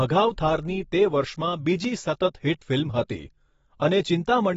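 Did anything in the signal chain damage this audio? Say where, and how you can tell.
Yes. The damage is at the codec stage, throughout the speech: nothing sits above 7.7 kHz, and sibilants turn dull, smeared and fizzy. This is likely AAC compression, with the cut-off fitting a bitrate near 24 kbps, where the encoder drops upper bands and quantises coarsely.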